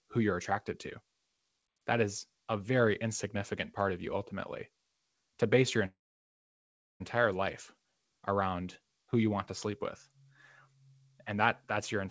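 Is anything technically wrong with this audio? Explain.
Yes. From 5.86 to 7.02 s there is a call audio freeze. The sound stalls, trails off briefly, then goes silent for about 1.06 s. Packets were likely held up and the jitter buffer ran dry. The sound then resumes where it stopped, nothing lost, now running 1.14 s late.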